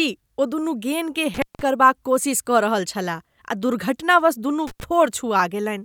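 An intermittent contact in a loose cable or plug opens briefly at 1.34 s for about 174 ms and at 4.67 s for about 88 ms, cutting the speech out with crackle at each edge.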